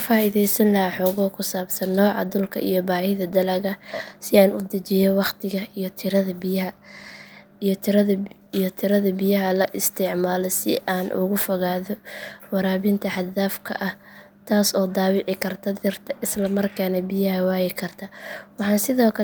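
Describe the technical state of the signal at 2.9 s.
At 2.9 s the speech signal is intact, with no dropout, clipping, glitch or other technical fault.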